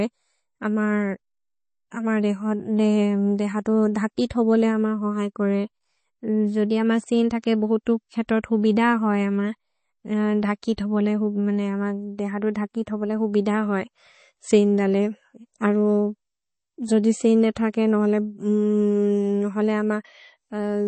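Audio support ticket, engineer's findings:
Speech, whole clip: watery, swirly texture, s sounds chirpy and metallic, attacks smeared, no content above about 8.3 kHz. Likely MP3 compression at a low rate, consistent with about 32 kbps: weak frequency lines switch on and off between frames. A plain low-pass filter would cut treble cleanly, without this swirl.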